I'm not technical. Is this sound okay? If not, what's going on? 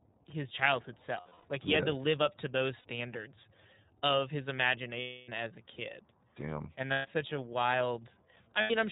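No, not quite. The whole speech clip has gone through the iLBC codec, a compression scheme built for internet phone calls. It throws away everything above 4 kHz, so the voice sounds muffled and phone-like, and it rebuilds each short slice of sound from a simplified model. That gives the voice a noticeably rough, slightly synthetic edge all the way through, which is what you're hearing as it not sounding natural.

On top of that there are five spots with lost iLBC frames, where chunks of the signal never arrived and the decoder filled the hole by repeating the last bit of voice mixed with noise. Each one sounds like a brief held, buzzy vowel: at 1.2 to 1.45 s, at 2.78 to 2.86 s right after "live up to those", at 5.0 to 5.29 s between "of his" and "as a kid", at 6.92 to 7.07 s just before "such a", and at 8.61 to 8.71 s. Because each chunk stands on its own, the voice snaps back cleanly afterwards.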